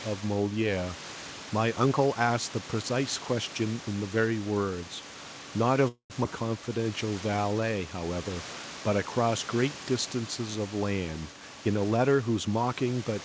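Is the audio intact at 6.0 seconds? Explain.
No. From 5.88 to 6.12 s there's a call audio freeze: the last sound drags on as a fading buzz, then about 80 ms of silence, before the speech resumes where it stopped, 220 ms late, likely because delayed packets emptied the jitter buffer.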